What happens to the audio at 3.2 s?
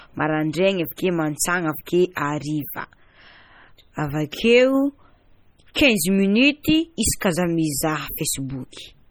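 At 3.2 s the speech sounds watery and swirly with smeared consonants, as it does across the whole clip. This is likely heavy MP3 compression at a low bitrate around 32 kbps: short of bits, the encoder zeroes weak frequency lines that flicker on and off between frames.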